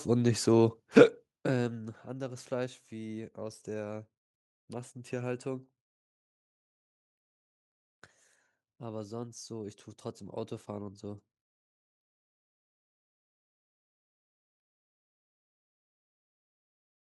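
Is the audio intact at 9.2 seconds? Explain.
Yes, the speech at 9.2 seconds is intact, with no fault heard at that moment.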